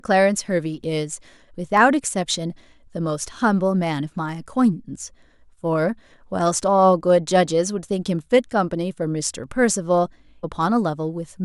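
At 0.84, 1.77, 4.29 and 9.44 s, a few samples were likely dropped from the speech stream, a fraction of a millisecond each, so the waveform jumps and leaves a single sharp click. At 10.43 s, a stream segment was likely skipped and the player moved on to the next, so the speech jumps ahead abruptly with a small blip.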